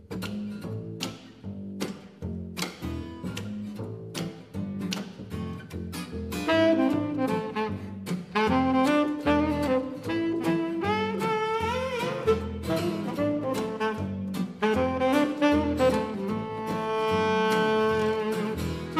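No technical faults detected.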